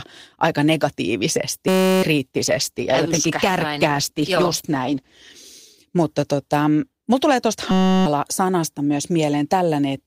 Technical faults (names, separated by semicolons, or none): system hang loop; call bitrate drop